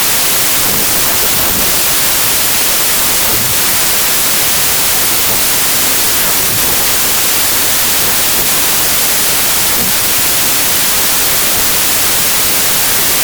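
Throughout, a wrong sample width (packed 24-bit read as 32-bit) buries speech in loud noise at 1.33 times speed and pitch, unlike a clean rate error.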